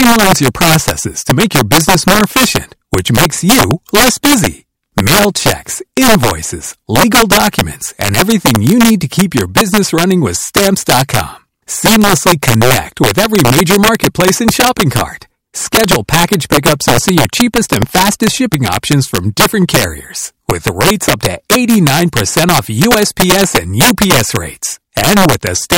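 Speech marred throughout by violent cracks on loud peaks, the signature of integer overflow: driven about 7 dB too hot, roughly two percent of samples wrap to the opposite sign.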